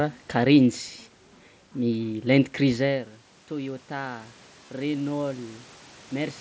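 Automatic gain rising runs from 3.49 to 6.36 s. The level at the microphone had fallen by about 14 dB, which fits the talker moving away from around 2.5 s. The gain control reacted by slowly raising its gain, by about 4 dB over nearly three seconds. Because the whole input is amplified, the speech and the room noise behind it swell together, with no sudden step.

Concealed Bluetooth headset packet loss occurs from 4.66 to 4.69 s, a gap of roughly 23 ms between headset and phone. Its length fits a short run of about three lost codec frames. The receiver filled the hole by repeating the closest-matching piece of the waveform just before it. This produces a brief, buzzy, held tone at full level, and a slight warble where the real speech picks up again.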